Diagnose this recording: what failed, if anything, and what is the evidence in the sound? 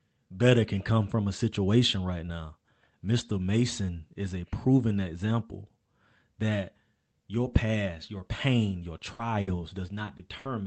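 Network stage: repeated packet loss (robotic sound) from 8.97 to 10.47 s. About six short gaps, up to 60 ms, were patched by stretching prior sound, giving choppy speech with pieces missing.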